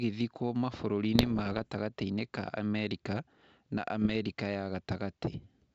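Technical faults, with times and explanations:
1.15–1.69 s and 4.02–4.17 s, bit errors on an ADPCM link: the speech breaks into pops and short rough, gritty bursts, with the level jumping briefly up and down. The first stretch lasts about half a second and is denser, the second about 0.15 s. Flipped bits reach the ADPCM decoder, which then misjudges its step size and prediction, so each error keeps ringing for several milliseconds. The wideband G.722 coding itself adds no more than a faint hiss.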